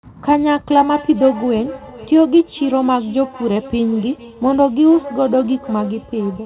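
From 0.49 s to the end, a feedback echo between two devices trails the speech. Each phrase returns roughly every half second, at about 18 dB below the speech at its loudest. A second device plays the call aloud, and its sound re-enters a microphone whose echo canceller only handles its own output.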